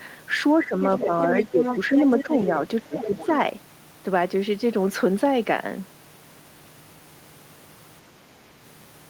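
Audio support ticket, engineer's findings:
Speech suppressed in double talk at 0.59–1.63 s, 2.23–2.5 s and 2.83–3.3 s. Talker ducks by around 10 dB, closer to 15 dB in the last one, in short patches. Likely the echo canceller clamping down while both ends talk over each other.

Other side's voice leaking through at 0.82–2.42 s, nearly as loud as the talker, and again at 2.95–3.32 s, quieter but still there. Far-end audio from the loudspeaker getting back into the mic, likely residual echo the canceller didn't fully remove.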